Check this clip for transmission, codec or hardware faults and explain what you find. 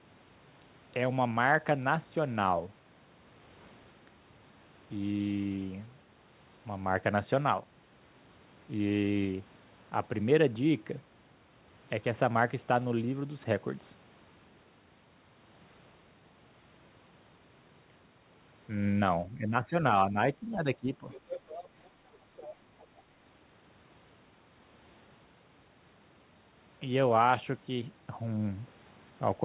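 Echo-cancellation faults are present in a short cluster between 19.3 and 23.0 s. The call path is band-limited with nothing above 4 kHz, which fits G.711 A-law at 64 kbps.

Speech suppressed in double talk, 19.3–19.76 s, 20.1–20.16 s and 20.4–21.04 s: the likely cause is that both ends were talking at once and the echo canceller could not tell the near talker from loudspeaker echo, so it attenuated everything. The speech dips by roughly 10 dB in the first and third spans and by a few decibels in the brief middle one, making the talker sound pushed back and uneven.

Other side's voice leaking through, 21.14–21.64 s, 22.37–22.53 s and 22.79–23.02 s: the far-end voice played from the talker's loudspeaker was likely not fully cancelled before the microphone signal was sent. A second voice appears in short scraps under the speech. It is fairly audible at first, about 10 dB below the talker, then fainter, around 20 dB below, and finally just a trace some 30 dB down.

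Background gated by the echo canceller, 21.9–22.14 s: while the loudspeaker was active, the canceller clamped the microphone, pulling the room sound down by about 7 dB for roughly a fifth of a second. The ambience briefly drops away and then returns when the suppression releases.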